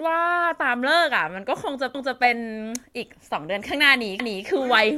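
Overlapping chunks at 1.95–2.20 s and 4.20–4.45 s: the speech is handled in 2-second chunks that each restart 250 ms early, so that slice plays twice, heard as a stutter.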